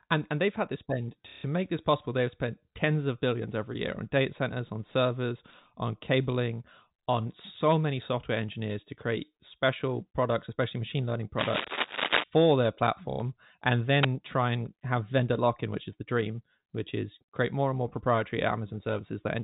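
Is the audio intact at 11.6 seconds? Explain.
No. From 11.38 to 12.24 s, a dense, uneven scratching and rustling sits over the speech at roughly the same loudness as the speech itself, so the moment at 11.6 s falls inside the disturbance. This is cable scratch noise, likely from a worn cable, connector or control being moved. As the contact shifts, its resistance jumps around quickly, and those rapid changes inject irregular bursts of noise into the signal for just under a second.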